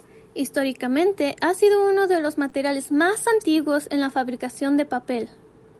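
At 2.49 s a short concealed packet loss occurs: about 20 ms of the speech stream failed to reach the decoder in time, and the receiver covered the gap by extrapolating the preceding sound for roughly 28 ms before cross-fading back into real audio near 2.54 s. What reaches the ear is a brief smeared wobble in the speech, where the genuine signal was briefly replaced by an imitation.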